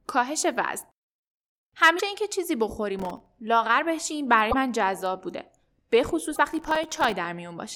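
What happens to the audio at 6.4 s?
A broken MP3 bit reservoir is the likely cause: after frames went missing, the next frame drew its borrowed data from the wrong bytes. From 6.35 to 6.38 s the speech jumps ahead and is replaced by a brief garbled disturbance, consistent with 24 ms frames.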